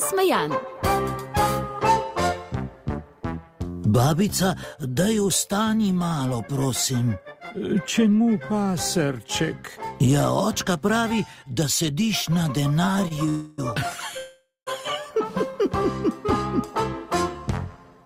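The audio plays through a late-arriving packet stream, and at 13.01 s it breaks into repeated stalls (stutter). Through 13.29 s the jitter buffer runs dry four times. Each time the receiver stretches the last sound across the gap, filling about 56 ms in total, with the longest hold at 25 ms. That concealment takes up roughly a fifth of the span. Nothing is dropped, so the passage drags and stutters rather than skipping.

Two call audio freezes follow. From 13.29 to 13.60 s the last sound is held as a continued, fading buzz or hiss for about 0.29 s, without falling to silence. From 14.18 to 14.69 s a similar hold lasts about 0.49 s, and about 0.17 s of it decays into silence before playback resumes. In both cases the audio picks up exactly where it stopped, so the freezes insert time rather than removing any. The likely cause is packets held up in transit, which emptied the buffer. Each freeze pushes playback later, by about 0.29 s and then about 0.49 s.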